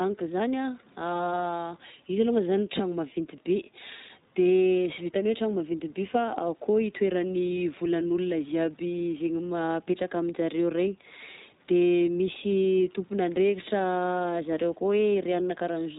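A speech recording runs through the iLBC codec for its whole length, and the coding damage is plainly audible. The band stops at 4 kHz, so sibilants and consonant detail are dulled, and the voice has the rough, slightly synthetic grain of a low-rate vocoder. Each 20 ms frame's excitation is coded on its own, without drawing on the previous frame, and the character of the degradation fits iLBC's 15.2 kbps mode.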